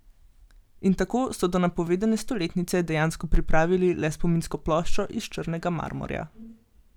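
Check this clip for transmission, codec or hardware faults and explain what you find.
One hardware-related fault is present: clock drift buffer slips, running from 0.39 s to 6.31 s. About five regular clicks land in the speech, spaced every 1.49 s. Each is a brief discontinuity where a short block of samples, around fifty, is dropped or repeated. The likely cause is two devices on independent clocks disagreeing by roughly 700 ppm, so the buffer between them drifts until it slips, then the cycle repeats at the same interval.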